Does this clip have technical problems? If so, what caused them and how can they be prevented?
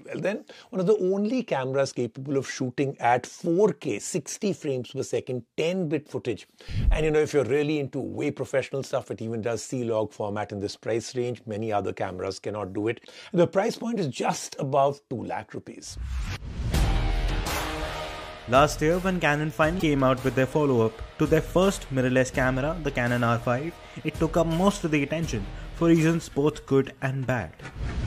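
Yes. From 19.76 to 19.83 s there is a short burst of damaged data in a compressed stream, heard as a brief glitch lasting about 70 ms. Corrupted or missing bytes leave the decoder unable to read those frames, so it outputs garbled material until it regains sync on a valid frame header. Unlike a buffer underrun, which is a delivery timing fault, this fault comes from corrupted data within the stream itself. Prevention requires checksummed transfer and error-protected or verified file storage.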